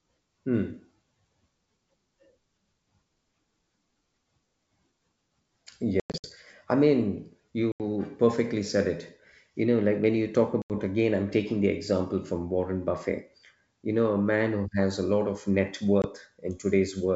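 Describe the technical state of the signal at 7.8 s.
Right at 7.8 s there's packet loss on the ADPCM call: a hard-edged gap of about 80 ms, running from 7.72 to 7.83 s, just after "I mean" and before "perfectly said it". That length fits roughly four lost packets filled with silence. Once the signal comes back, the decoder's predictor and step size no longer match the sender's, so the speech returns with a little distortion, settling within some tens of milliseconds. The G.722 wideband coding around it is working normally.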